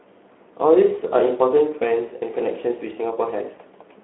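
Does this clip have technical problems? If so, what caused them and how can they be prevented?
Yes. Speex codec damage is plainly audible throughout the speech. The sound is confined to a telephone-style band of roughly 300 Hz to 3.4 kHz, with nothing above 3.9 kHz, and the voice has the noisy, hoarse texture of a CELP coder that has too few bits to model the excitation accurately. This points to a low-rate Speex setting, around 11 kbps. To prevent it, encode at a higher Speex quality in wideband mode, or use a modern codec such as Opus.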